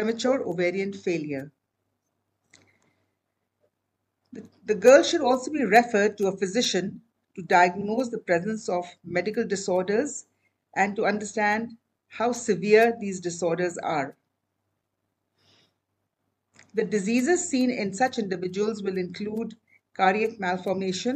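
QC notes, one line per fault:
7.80–7.85 s: repeated frames. A 52 ms block plays twice, giving a brief stutter, which fits two duplicated compressed frames.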